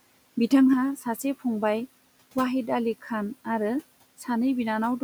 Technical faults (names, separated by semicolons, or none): one channel drops out; speech cut by the noise suppressor